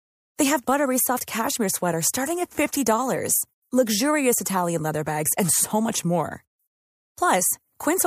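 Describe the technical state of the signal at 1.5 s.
At 1.5 s the speech signal is intact, with no audible dropout, distortion, glitch or other fault.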